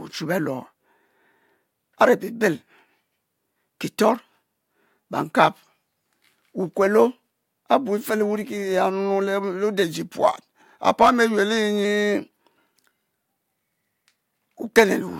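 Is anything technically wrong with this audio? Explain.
Yes. There's a drift correction step, twice: from 5.26 to 6.71 s and from 9.84 to 11.85 s the speech slows about 5.4% and drops roughly 96 cents, nearly a semitone, then snaps back. That's likely clock-matching software briefly changing the playback rate to rebalance its buffer.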